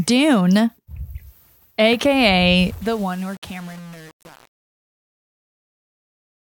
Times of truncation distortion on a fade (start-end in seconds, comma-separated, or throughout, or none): 2.59-6.47